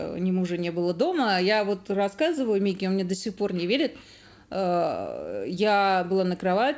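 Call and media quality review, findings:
Nothing to flag here: the audio comes through the call path as expected, with the band stopping at 8 kHz the way a G.722 wideband link does, and no dropouts, glitches or other trouble turning up along the way.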